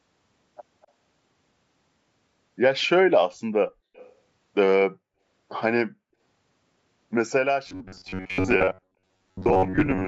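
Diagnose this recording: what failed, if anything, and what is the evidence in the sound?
The call processing let an echo leak through twice, both times a copy of the speech trailing by 249 ms. At 0.82 to 0.87 s it's a faint scrap, about 40 dB down. At 3.94 to 4.13 s it's clearer, about 25 dB down. That's likely a far-end speakerphone whose echo canceller didn't fully catch its own playback.

From 7.67 s to the end, the speech goes into a rigid metallic buzz at 93.8 Hz. That's the robotic sound from repeated short buffers, and it points to the driver or buffer stage. Likely cause: audio arriving too seldom, so roughly 10.7 ms chunks get replayed and about half the real audio is skipped.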